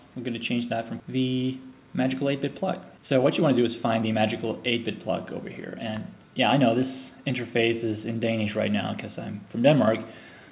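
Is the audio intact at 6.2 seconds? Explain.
No. From 5.83 to 7.10 s a jitter buffer speed-up is under way: the receiver's buffer had built up more audio than it targets and drained it by repeatedly cutting short pitch-period pieces, around 70 ms in total. The sound runs about 6% fast at unchanged pitch and feels hurried.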